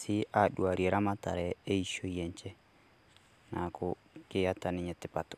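Listening closely to the whole recording, nothing in the speech stood out as a technical fault.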